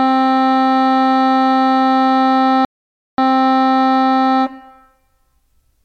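A rebuffering stall interrupts this music from 2.65 to 3.18 s: the player exhausted its downloaded audio, fell silent for about 0.53 s while waiting for more data, then resumed exactly where it stopped, so no music is lost but the playback runs longer.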